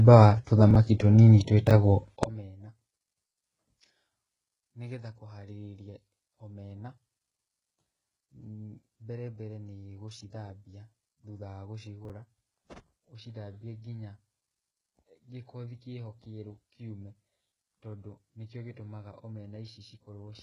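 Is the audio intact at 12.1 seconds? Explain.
No. Between 12.05 and 12.10 s, an audio chunk of about 11.6 ms was written roughly three chunks late, so the chunks are out of order. Nothing is missing, but the sequence is scrambled, leaving a brief jumbled stutter at the hard joins.

From 2.23 s to the end, one channel appears inverted, with its polarity reversed. The sound common to both channels cancels when they are summed to mono, so at 12.1 s the centred speech drops by about 25 dB, leaving only a faint residue of whatever differs between the channels.

Throughout the clip, the treble above the coded band is resynthesised rather than preserved, most likely from HE-AAC compression at a rate that points to about 12 kbps. Nothing is present above 11.1 kHz, and heavy coding damage makes sibilants and upper harmonics sound gritty and metallic, out of step with the lower spectrum.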